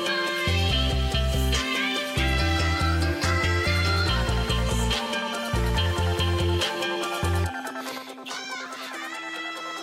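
At 7.98 s the level falls abruptly by about 6 dB and stays down to the end of the clip, and anything carried only on one side disappears rather than just getting quieter. This is one channel dropping out. The likely cause is that one stereo channel was lost from that point on. When the two sides are summed to mono, the shared material survives at half amplitude, while content unique to the missing side vanishes.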